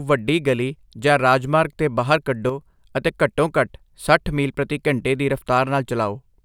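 From 2.49 to 2.61 s, one stereo channel likely drops out, which is a one channel drops out fault. In the mono sum, the speech shared by both sides falls abruptly by about 6 dB for those 0.12 s, a brief dip before the level snaps back.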